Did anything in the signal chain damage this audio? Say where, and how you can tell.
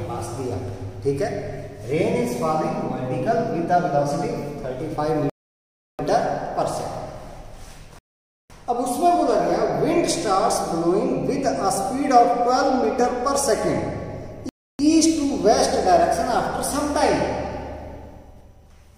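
Yes. Three rebuffering stalls point to the network-to-playback stage. Dead silence appears at 5.30–5.99 s (0.69 s), 7.99–8.50 s (0.51 s) and 14.49–14.79 s (0.30 s), and after each gap the sound picks up exactly where it broke off. On a waveform these are flat-line gaps, and a spectrogram shows blank vertical bands with no smearing. The player drained its download buffer and paused until more data arrived, adding time without losing material.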